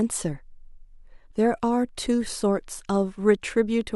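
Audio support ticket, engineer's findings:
No audible faults found on review of speech clip.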